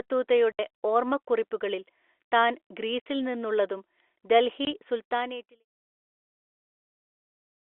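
Packet loss filled with silence at 0.52 to 0.59 s, 3.00 to 3.06 s and 4.65 to 4.67 s: chunks of the stream never arrived, and the receiver played dead silence in their place. The speech drops out for 70, 60 and 20 ms, with hard edges, and the gap lengths fit 10 ms packets. The narrowband telephone sound of the G.711 line, and a smooth fade-out from about 5 s to 5.66 s, sit alongside these gaps.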